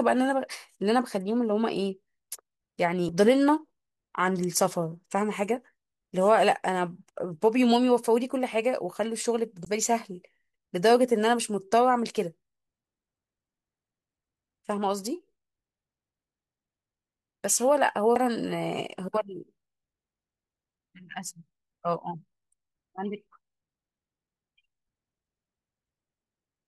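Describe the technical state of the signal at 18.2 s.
A CD skip occurs at 18.16 s. A knock or disc flaw threw the laser onto another turn of the spiral, so the speech drops out for a few milliseconds with a tick, then resumes abruptly from a different point on the disc, displaced by whole disc rotations.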